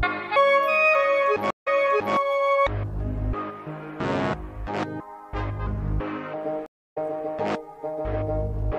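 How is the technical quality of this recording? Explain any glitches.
The recording has two stream reconnect glitches. In each, the connection dropped and the player restarted its decoder mid-stream. At 1.50 to 2.14 s, after 143 ms of silence, the audio resumes about 0.5 s earlier and repeats material. At 6.66 to 6.98 s, a 285 ms gap ends with the audio jumping ahead by roughly a fifth of a second.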